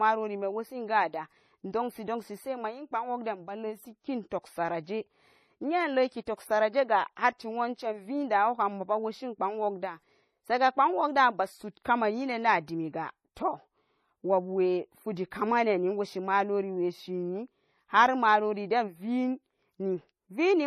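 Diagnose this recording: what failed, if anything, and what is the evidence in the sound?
The failure sits at the codec stage and runs the whole length of the speech. There is no energy above about 14.1 kHz, and the sound carries two layers of coding artefacts at once. That points to transcoding between lossy codecs, likely a low-rate AAC-LC encode re-encoded to MP3 at around 48 kbit/s. The second encoder spent its limited bits reproducing the first encoder's artefacts and added its own distortion on top, while the lowest cut-off in the chain persisted.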